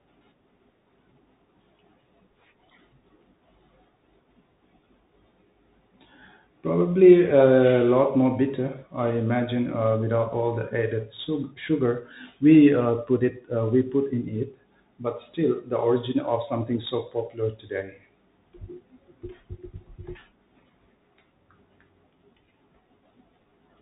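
Speech, passed through a Bluetooth CVSD headset codec throughout. Nothing survives above 4 kHz, s sounds turn scratchy, loud high passages outrun the step and distort, and a granular hiss runs underneath, which fits a 64 kbps one-bit stream. A plain telephone band-limit would sound narrow but clean.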